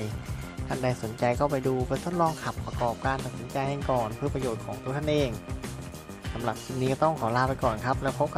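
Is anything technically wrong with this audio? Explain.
No, nothing is technically wrong with this audio.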